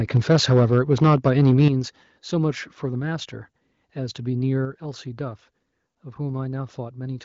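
Microphone overload runs from 0.91 to 1.68 s. The loudest syllables in this stretch carry a harsh, crackling edge, with peaks pushing about 4 dB past the converter's limit and around 7 percent of samples flattened at that limit. The likely cause is that the microphone input volume was set too high, so the converter ran out of headroom and sliced the tops off the waveform. The added distortion sits on top of band-limited wideband speech that stops near 7.5 kHz.

Microphone volume stepped down at 1.68 s, right as the distortion ends. Speech and background fall together by about 8 dB in a single abrupt step rather than a smooth fade. This is likely the call software reacting to the clipped peaks just before it by cutting the device's input gain in one move.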